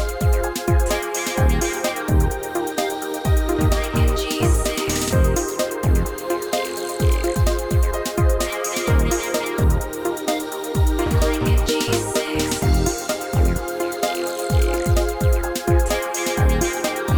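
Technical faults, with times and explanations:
3.57 s, dropped samples: a single sharp click, a hairline tick across every frequency at once. The likely cause is a fraction of a millisecond of samples going missing, so the waveform jumps straight to a later value, too briefly to remove any sound.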